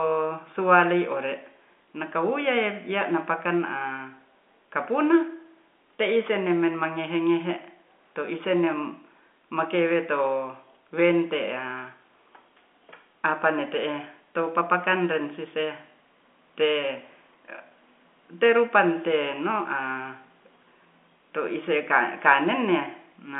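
No technical faults occur at any point in this speech, which comes through with the narrow band of an ordinary telephone line.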